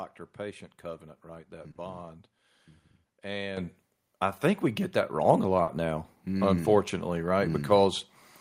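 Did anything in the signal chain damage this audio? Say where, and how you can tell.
Yes. Network stage: short concealed packet loss at 1.71 to 1.78 s and 5.63 to 5.70 s, where about 40 ms went missing and the receiver extrapolated the preceding sound, leaving brief smears.

Call processing stage: the microphone volume stepped up at 3.57 s by about 8 dB and at 5.25 s by about 4 dB, with voice and background rising together as automatic input-level control raised the device gain.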